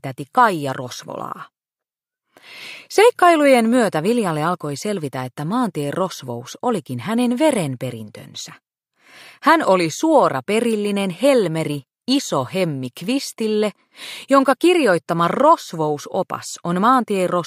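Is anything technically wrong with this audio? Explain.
No, nothing technically wrong can be heard in this audio; the signal stays steady and intact throughout, with nothing audibly disturbing it.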